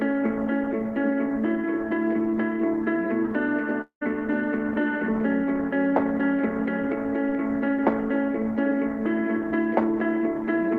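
A long network dropout occurs from 3.81 to 4.03 s. The last sound smears into a fading buzz for about 0.2 s, then falls silent for 0.1 s. Audio resumes with about 0.2 s lost, likely because packets stopped arriving and the receiver concealed the gap.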